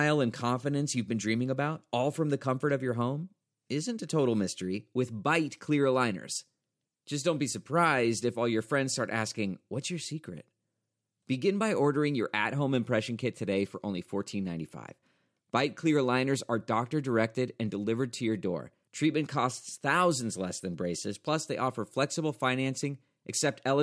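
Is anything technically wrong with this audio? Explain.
No, I hear no technical faults anywhere in this speech recording.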